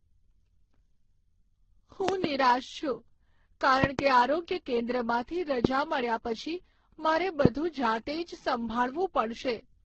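Throughout the speech there is a layered smear that points to transcoding between lossy codecs. Nothing is present above 8 kHz, and the artefacts do not sound like a single encoder: distinct artefacts from different encoders are heard together. That mix fits audio likely encoded at a low bitrate, decoded, and re-encoded more than once. Each pass would have spent bits on the previous damage and added its own, while the lowest bandwidth limit stayed in place.

From 2.09 to 2.26 s, a loud pop appears as two sharp clicks in quick succession, roughly 20 dB above the speech, which carries on beneath them. The same double pop recurs from 3.84 to 4.01 s. A single pop follows from 5.65 to 5.67 s. Each has the abrupt onset of a voltage step passing through the downstream circuitry, likely from a plug, switch or static discharge.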